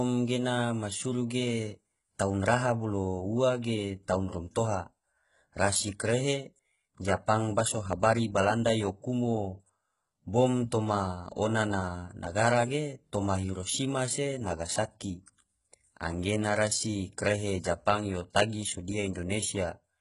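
All the way through, the speech has that gritty, metallic top end, and nothing comes through above about 11.1 kHz. That's likely HE-AAC compression at a very low bitrate, something like 12 kbps, with the treble rebuilt from copied lower bands, so the s sounds come out lispy and synthetic.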